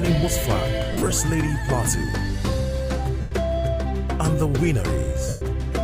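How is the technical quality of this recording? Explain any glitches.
Three dropouts mar the recording. Lost LE Audio frames at 0.93–1.13 s, 3.21–3.32 s and 5.29–5.42 s. The decoder refills gaps with a noisy smear. The first gap is scattered, its longest run about 50 ms.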